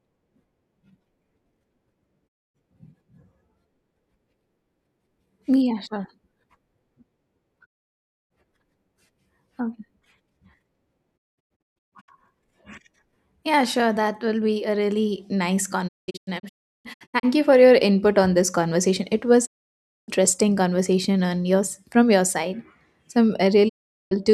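Digital broadcast dropout mutes this speech at 2.27–2.56 s, 7.64–8.32 s, 11.16–12.10 s, 15.87–17.25 s, 19.45–20.10 s and 23.68–24.13 s. Each time, the receiver lost usable frames and faded to silence within about 20 ms, so that stretch of the broadcast is simply gone. The third and fourth gaps break into several short holes, lasting up to 0.19 s and 0.35 s respectively. The fourth falls between "be a really nice" and "you for your input", and the fifth ends just before "conversation on yours from".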